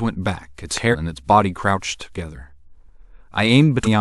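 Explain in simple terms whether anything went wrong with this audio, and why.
Two separate problems can be heard in this speech recording.

The first is a loud pop at 0.77 to 0.79 s: a single sharp click that sits on top of the speech, clearly louder than the talking, while the speech carries on underneath. This kind of pop is likely caused by a sudden electrical jolt reaching the recording chain, such as a cable being plugged in, a switch being flipped, or a static discharge.

The second problem is compressed frames skipped, and it happens twice. The recording was stored in a compressed format, which packs the sound into short blocks, here apparently about 46.4 ms each. At 0.91 to 0.95 s, roughly fifteen of these blocks are missing or were rejected as damaged, so the audio jumps ahead by about 0.7 s. At 3.83 to 3.87 s, around four blocks are lost, which is a jump of about 0.2 s. Each time, the speech is suddenly further along.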